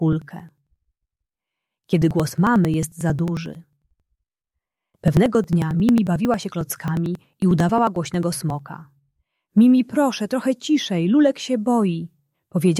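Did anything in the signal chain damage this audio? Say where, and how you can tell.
Yes. Periodic USB or driver dropouts at the driver or buffer stage, from 0.13 s to 8.59 s: ticks recur every 0.09 s, each skipping about 10 ms of audio. The rigid spacing and skipped rather than silenced gaps set this apart from irregular network packet loss.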